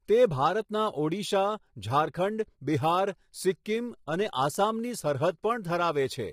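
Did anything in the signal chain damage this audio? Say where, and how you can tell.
Yes, at the codec stage. The speech sounds rough and grainy from start to finish, with noise filling the gaps between harmonics and a thin, synthetic-sounding top end. That's likely low-delay AAC compression, AAC-ELD at a low bitrate around 24 kbps, which leaves too few bits to code the spectrum cleanly.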